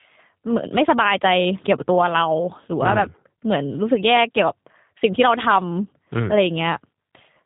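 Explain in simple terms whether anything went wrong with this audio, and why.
The speech has been squeezed through the G.729 codec, a low-rate phone-call format, and the damage is plainly audible from start to finish. Nothing above about 3.8 kHz survives, so the sound is thin and phone-like. Unlike simple muffling, which only dulls the sound, this codec rebuilds the speech from a rough model of the voice, so it also comes out slightly harsh and synthetic.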